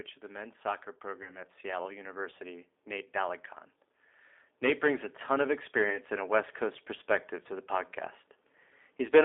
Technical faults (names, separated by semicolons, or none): G.729 codec; VoIP packet loss concealed by the speech codec